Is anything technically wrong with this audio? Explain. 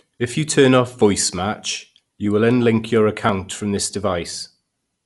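Yes. Throughout, the speech sounds dull, with nothing above 11.5 kHz and a rough, fluttering noise around voiced tones. The likely cause is Dolby Digital compression at a bitrate that fits 64 kbps. The encoder narrowed the band and left many frequency lines unbitted, so the decoder filled them with dither noise.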